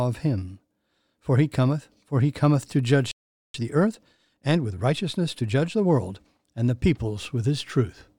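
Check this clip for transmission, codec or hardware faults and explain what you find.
Two playback faults sit back to back in the speech.

From 3.11 to 3.54 s there is a playback stall: the audio cuts to silence for about 430 ms in mid-flow, then resumes. The likely cause is the player running dry of buffered data or its output thread being blocked until it recovered.

From 3.54 to 6.40 s comes time-compressed catch-up. The player works off the backlog built up during the gap by dropping short slices and cross-fading the joins, running at 1.15 times normal speed. The speech sounds hurried at unchanged pitch.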